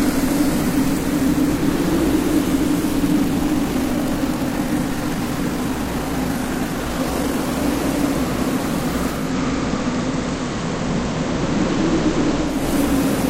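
From 3.06 to 7.62 s the audio runs about 1.44 times faster while its pitch stays put, a time-stretched section that was likely produced by software squeezing the passage to fit a shorter length by dropping short pieces. It sounds rushed. On a spectrogram the harmonics keep their frequencies but events crowd closer together, and the waveform shows small seams where pieces were spliced.

At 9.09 s the sound cross-fades over about 284 ms from digital radio to the FM broadcast of the same station, and it returns to digital at 12.69 s. The level holds steady, and a faint hiss, around 40 dB below the signal, comes up. A spectrogram shows a thin noise floor across the band, while the waveform's envelope stays the same height.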